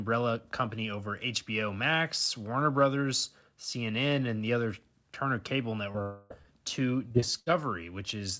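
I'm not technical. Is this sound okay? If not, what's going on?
No. There are three kinds of problem, all in the last few seconds of this speech clip.

Short concealed packet loss happens twice, from 5.92 to 5.96 s and from 6.42 to 6.46 s. Each time, about 20 milliseconds of the call arrived too late to be played. The receiving phone covered each hole by stretching out the sound just before it and then blending back in. You hear a tiny smear or wobble, and a very short sound can get swallowed.

Between 6.02 and 6.32 s, the sound stops being real speech and turns into a continuation of what came just before, which fades as it goes. It never drops to true silence, because that stand-in fills the whole stretch. Then the speech resumes with roughly 0.3 s of it simply gone. That pattern is most likely a long network dropout, where nothing got through for that stretch.

From 7.08 to 7.48 s there is repeated packet loss, which causes a robotic sound. 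Four separate holes come in quick succession, the longest about 60 milliseconds, and the phone patches each one the same way. About a third of that stretch is patched rather than real, so the speech turns choppy, with small pieces missing.

Separately, the call's audio format cuts everything above 8 kHz. That makes the whole clip a little less crisp than a face-to-face recording.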